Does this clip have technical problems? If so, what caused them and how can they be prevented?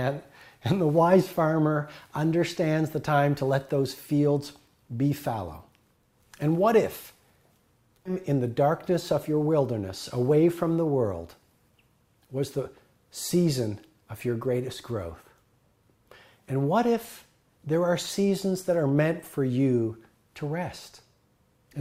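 Yes. Stream segment skipped at 8.05 to 8.11 s: the sound jumps ahead with a brief blip, likely because one segment failed to load and playback moved to the next. Buffering further ahead and retrying failed segment requests before advancing would prevent it.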